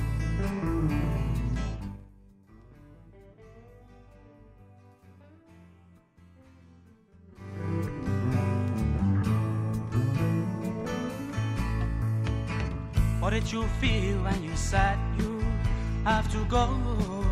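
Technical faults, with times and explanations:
1.64 to 2.12 s, zipper noise: the level falls by roughly 25 dB in unsmoothed 2 dB jumps, around thirty a second, and each jump leaves a small click, so the fade ticks audibly as it goes down. On the waveform the envelope descends as a staircase rather than a slope. On the spectrogram each step shows as a faint vertical line across the frequency range, evenly spaced through that half-second.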